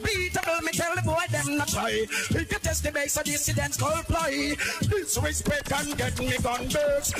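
Right at 0.43 s there's an electrical switching spike: a sharp snap that sits on top of the sound rather than belonging to it. It's very brief, a few milliseconds, peaking somewhere near -10 dBFS. The likely culprit is a nearby switch, motor or static discharge throwing off a short arc that the audio line picked up, so it lands as a sharp crack.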